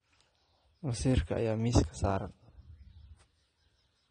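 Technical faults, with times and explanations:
Throughout, AAC compression: the speech carries plainly audible coding damage, and nothing remains above 9.7 kHz, so it sounds dull and closed in. The likely cause is AAC-LC at a low bitrate, which fits a stream of around 32 kbps. The encoder works frame by frame on frequency lines and, short of bits, drops the upper band entirely and quantises the rest coarsely, so damage replaces fine detail.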